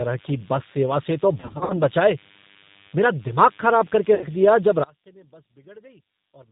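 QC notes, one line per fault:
throughout: DECT cordless phone buzz. A thin, steady buzz sits about 30 dB under the speech, repeating at 100 Hz with a dense stack of harmonics. A nearby cordless handset or base sends a radio burst every 10 ms, and the audio circuitry rectifies it into sound. Mains hum differs: it is smoother, sits at 50 or 60 Hz, and lacks this sharp, gated, comb-like edge. The buzz stays constant through pauses.
throughout: G.729 codec. The speech is band-limited, with nothing above 4 kHz, and it has a plainly audible rough, synthetic grain. The pitch and vocal-tract modelling fits a low-rate 8 kbit/s speech codec. The speech is rebuilt from a filter and a few pulses per frame instead of being sent as a waveform. Unlike plain low-pass filtering, the remaining band is also coarsened.
1.40–1.76 and 4.15–4.26: VoIP packet loss concealed by the speech codec. The first gap follows "से तो". 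About 180 ms is missing, scattered over 300 ms in runs of up to 60 ms, which fits about six lost packets. The second gap follows "दिमाग खराब कर के" and returns at "दिया जब". It is about 60 ms, which fits two packets. In both, the decoder stretches the last pitch and filter into a buzzy tone or coloured noise that fades. The voice stays weak for a moment after it returns. A hard dropout would be silent instead.
4.84–6.51: one channel inverted. After "दिया जब" the speech drops by about 28 dB and becomes a faint trace until the end. The cause is likely one stereo channel with reversed polarity. When the two channels are summed to mono, the centred voice cancels and only their small difference remains. A level fade would keep the tone intact, but here only that small mismatch is left.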